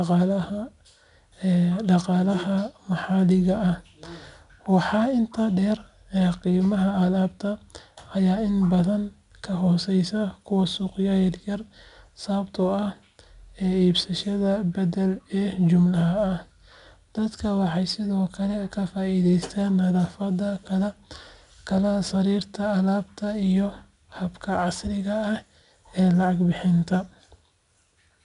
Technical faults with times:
0.00-28.25 4-bit ADPCM compression

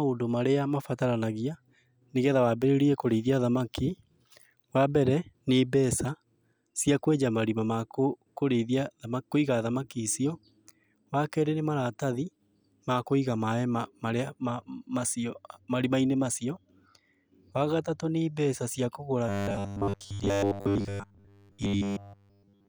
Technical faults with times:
19.29-22.68 robotic sound from repeated short buffers

